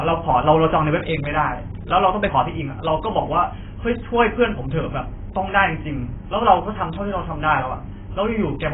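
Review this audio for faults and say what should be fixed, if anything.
The speech is dull and band-limited for its whole length, with nothing above about 3.8 kHz, and the remaining spectrum is heavily smeared, with a watery, warbling texture on sustained vowels and fizz on sibilants. The likely cause is AAC compression at a very low rate. The sound points to AAC-LC around 16 kbps, where the encoder drops the upper band and starves the rest of bits. Encode at a higher bitrate or use a codec suited to low-rate speech.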